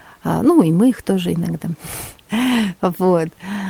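A short bit of speech with nothing technically wrong in it, just faint background room noise sitting about 39 dB below the speaker.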